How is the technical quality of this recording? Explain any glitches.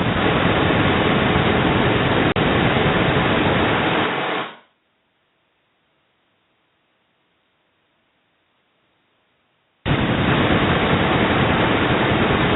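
The recording has two clear problems: a strong echo leak near the start and end, and one short dropout. The narrowband sound, with nothing above 4 kHz, fits G.711 telephone coding.

From 0.17 to 4.68 s, and again from 10.24 s to the end, a second copy of the speech follows the original by about 0.35 s at first and about 0.38 s later, roughly as loud as the direct speech. The likely cause is an echo canceller on a speakerphone that failed to remove what its microphone picked up from the loudspeaker, so that sound travelled back down the line. On a spectrogram, each syllable's pattern appears twice, with the copy shifted right by that delay. The waveform looks smeared, with no clean gaps between bursts.

At 2.32 s, inside the first echo stretch, there is a 40 ms packet loss filled with silence, a length that fits two lost 20 ms packets. The receiver had no audio for that span and played silence, so the sound stops dead with hard edges. 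The waveform shows a flat line with abrupt cuts. On the spectrogram it appears as a blank vertical strip.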